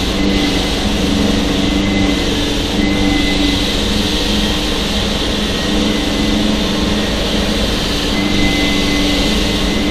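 No technical faults are audible.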